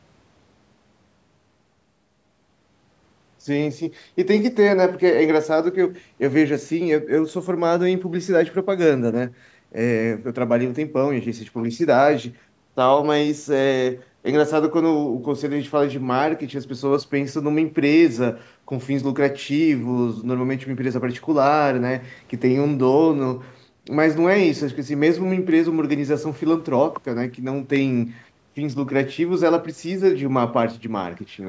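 From 0.76 to 30.0 s a click recurs every 2.25 s, likely clock drift buffer slips, each a waveform step and thin vertical spectrogram line.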